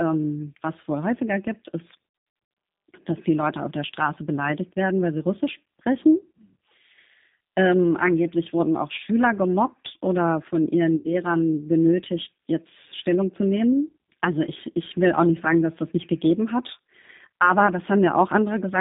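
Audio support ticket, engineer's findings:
G.729 codec, whole clip, plainly audible. Speech band-limited to roughly 150 Hz to 3.7 kHz, nothing above. Rough, slightly synthetic texture consistent with an 8 kbit/s CELP path: vocal tract filter plus pitch predictor plus sparse pulse excitation per 10 ms frame. Fine detail between pulses not reproduced.

VoIP packet loss concealed by the speech codec, 2.09 to 2.57 s. Repeated dropouts across 480 ms, roughly 330 ms of it missing, longest gap 90 ms. Decoder extrapolates last pitch and filter, gain decaying each frame, giving stretched, fading tone or coloured noise. Same fault again at 10.96 to 11.16 s, 90 ms lost over 3 packets, same concealment. Speech stays weak and distorted briefly after each return, because the decoder state needs time to recover.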